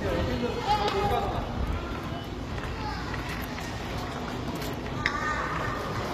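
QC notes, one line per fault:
Throughout: HE-AAC compression, likely. Treble is gritty and metallic with nothing above 14.9 kHz, as upper bands are copied from lower ones, which fits roughly 24 kbps.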